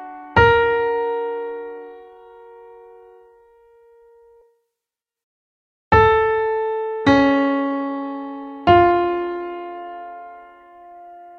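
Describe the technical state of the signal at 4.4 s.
At 4.41 to 4.43 s the sound skips ahead. About four tenths of a second of audio is missing. It was dropped in transit or discarded by an overflowing jitter buffer while later audio waited. Playback jumps forward with no gap, the two sides butted together abruptly.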